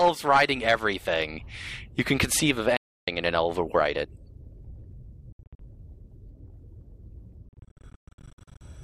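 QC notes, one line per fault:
2.77–3.08 s, Bluetooth dropout: the output goes silent for about 0.31 s with abrupt edges, then resumes further along as if playback had continued, likely from packets reaching the headphones too late. The waveform flatlines, and the spectrogram shows a blank full-band column with sharp vertical edges.
5.32–5.59 s, Bluetooth dropout: several short holes spread over about 0.27 s remove about 0.19 s of sound in total, the longest lasting 67 ms. This choppy stutter is likely from packets lost intermittently on the wireless link. The waveform and spectrogram both show a comb of thin empty slices.
7.49–8.62 s, Bluetooth dropout: a longer stretch of repeated gaps removes about 0.68 s of sound across 1.13 s, the longest hole lasting 120 ms. Each restart skips ahead rather than picking up where it stopped, which likely points to sustained packet loss. The spectrogram shows many hard-edged blank columns, and the waveform has repeated flat segments.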